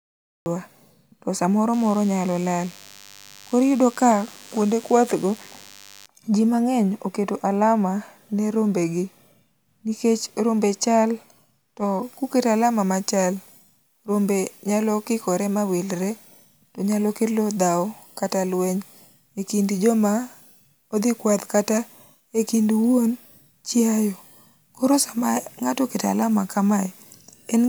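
The recording began late, so the speech has a cut-off start: the first 0.46 s are digital silence, and at 0.46 s the sound appears abruptly, already partway through rather than rising from a natural onset. Nothing before that point was captured, so the opening has no attack and sounds clipped off, as if someone had started listening a moment too late.

From 1.73 s to 6.06 s there is DECT cordless phone buzz. A nearby DECT handset or base station sends a radio burst every 10 ms, and some part of the audio circuit rectified that interference into the signal. The result is a thin, steady buzz at 100 Hz, rich in harmonics, sitting well below the speech. It begins just before "ji mang'eny oketo".

From 12.03 s to the end, pre-emphasis left on affects the speech. The treble boost applied for recording or transmission was never undone by the matching de-emphasis. The curve fits the CD 50/15 µs standard, leaving the highs about 8 dB too strong at 10 kHz relative to 1 kHz. 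As a result, this whole section sounds thin and overly bright, with sibilants pushed forward and hissy.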